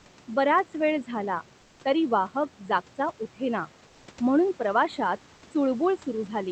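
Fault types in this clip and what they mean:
Channel delay (comb filtering): The top end sounds dull and slightly hollow, with a notch near 7 kHz, because one channel lags by a few samples before mono summing.
Comfort noise in place of the background: From 1.61 to 1.79 s, just before "तरी वाहक", the background turns flat, featureless and about 2 dB quieter, likely from Opus discontinuous transmission.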